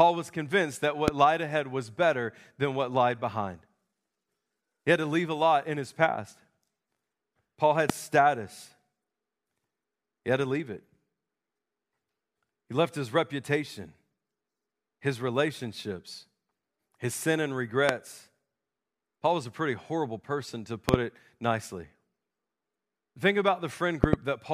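Loud pops strike the speech at 1.08, 7.90 and 17.89 s, with double pops at 20.89–20.96 and 24.04–24.16 s, each about 20 to 25 dB above the speech. Likely voltage pulses, they appear as sharp waveform spikes and thin full-height spectrogram lines.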